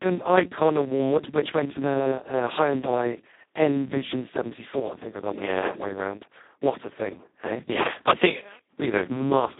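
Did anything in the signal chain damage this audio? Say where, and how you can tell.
Yes. The Speex codec stage degrades the speech throughout: it sounds hoarse and robotic, band-limited to 150 Hz–3.7 kHz, with nothing above 3.8 kHz, which fits Speex's lowest, near-vocoder setting, around 2 kbps.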